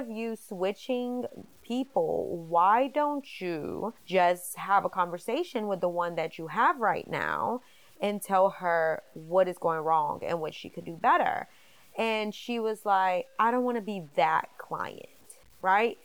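Across the whole speech clip a gritty, grainy distortion clings to the voice, likely from low bit depth without dither, about 8 bits truncated. The error, roughly 35 dB below the signal, tracks the speech, unlike steady dither hiss.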